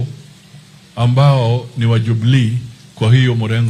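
No technical faults can be heard anywhere in the audio, and the signal stays steady and intact throughout.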